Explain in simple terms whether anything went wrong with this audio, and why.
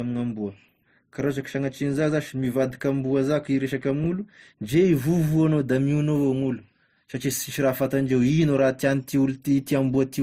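Transcoding between lossy codecs runs through the whole speech clip: nothing is heard above 15.7 kHz, and two layers of compression smear are mixed together. This likely comes from the recording being squeezed into MP3, then re-squeezed into Opus, which spent effort copying the first codec's damage while adding its own.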